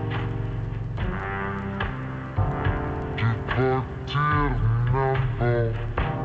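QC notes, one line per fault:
Throughout: stereo read as mono. Left and right samples, stored alternately, are being played back one after another as a single channel, so the audio runs at 0.5x speed and sits 12 semitones (an octave) low, with a fainter mirrored copy in the upper half of the spectrum.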